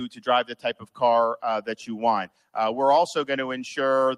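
Throughout the clip, a speech noise suppressor applied to music or sounds pulls held and decaying parts down by a few decibels, so the level pumps and thins. From 0.50 to 1.01 s, sound is cut by the noise suppressor for roughly a third of a second, dropping by up to about 12 dB as sustained portions sink and tails shorten.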